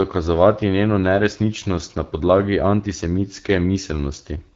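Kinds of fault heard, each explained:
AMR wideband (HD Voice) codec: The speech passes through a wideband speech codec, with nothing above 7.3 kHz. The plainly audible rough, raspy texture from a pulse-driven vocal tract model points to a low AMR-WB mode, consistent with 8.85 kbit/s.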